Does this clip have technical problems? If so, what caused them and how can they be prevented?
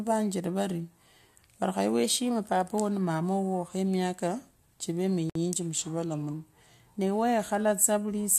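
Yes. There are two kinds of fault in this speech clip.

Drift correction step. From 2.04 to 2.71 s the speech runs 5.85% fast. Pitch rises by about 98 cents, close to a semitone. Then it snaps back. From 5.77 to 6.34 s the opposite happens. Speech slows by 5.85% and drops about 104 cents. This is likely clock-matching software changing the playback rate in one jump to refill or drain its buffer. Prevent it by correcting drift with gradual, fine-grained resampling, or by running both devices from one shared clock.

Gap at a join of encoded pieces. At 5.30 s, right after "khemiaka chive", the sound stops for 56.8 ms. The codec smears its edges. Then the speech carries on where it stopped. Separately encoded pieces were joined, and the joins appear to fall every 6.0 s. Each piece kept its encoder's start-up silence and the padding in its last frame. Prevent it by trimming that delay and padding with gapless metadata, or by encoding the audio in one continuous pass.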